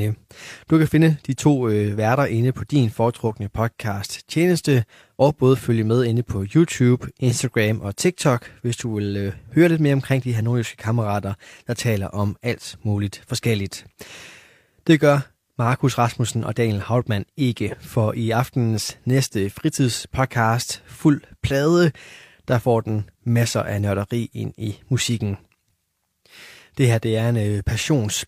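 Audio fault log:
No faults were heard anywhere in the speech.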